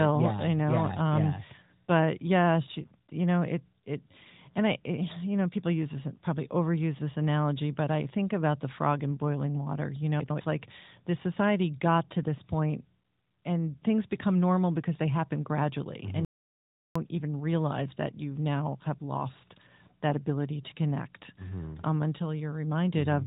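Speech carried over an AMR narrowband mobile codec, which cuts everything above about 3.8 kHz and adds a light codec colouring, with two faults in the stream. At 10.2 to 10.4 s, just before "like the society got", the chunks are out of order: one 100 ms block was written a chunk late, so it plays after the block that should follow it. Nothing is missing, but the two swapped pieces make the sound briefly jumbled, with three hard joins. From 16.25 to 16.96 s there is an audio dropout to silence, most likely from the input being lost for a moment while the recorder kept writing silence. For about 0.71 s the sound cuts to silence with no room tone, and whatever was said in that span is gone before the speech resumes on "even realize that you".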